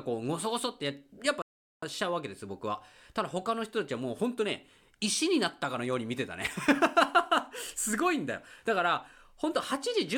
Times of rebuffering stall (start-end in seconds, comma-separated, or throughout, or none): 1.42-1.83